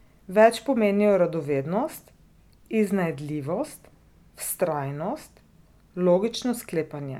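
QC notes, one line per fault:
Nothing to flag here, the speech comes through without any problems worth noting.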